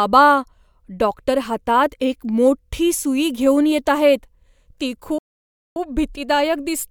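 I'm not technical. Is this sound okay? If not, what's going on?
No. At 5.18 s the speech suddenly cuts out mid-flow and stays silent until 5.76 s, a gap of about 0.58 s. This is a playback stall, likely because the player briefly ran short of data. A natural pause would fall between phrases rather than break one off.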